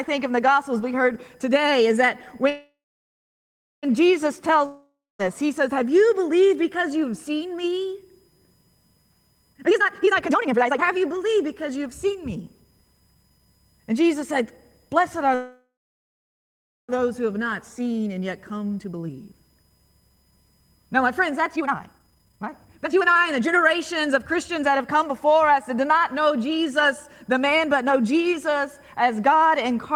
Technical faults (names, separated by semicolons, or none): USB whine; call audio freeze; long network dropout; jitter buffer speed-up